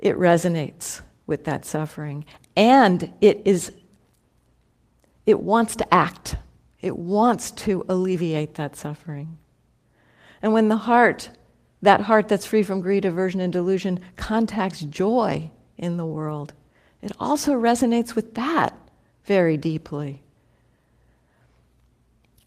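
At 16.29 to 16.31 s there is a lost packet rebuilt from error correction. The stretch sounds consistent with a single dropped packet. The decoder filled it with a low-bitrate copy carried in the following packet, the in-band forward error correction mechanism in Opus. As a result there is no audible gap or dropout in the speech. The 20 ms section sounds briefly coarser and noisier than the surrounding audio, a short grainy patch before normal quality resumes.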